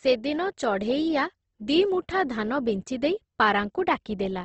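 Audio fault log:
Throughout: Opus compression. The encoder appears starved of bits, likely an Opus stream running in its music (CELT) mode at a rate that fits something near 16 kbps, restricted to wideband. With too few bits, band energies are kept but detail inside bands is filled by folding or noise, so the speech turns rough, grainy and noisy rather than swirly. Plainly audible damage, and nothing remains above about 8.2 kHz, dulling the top end.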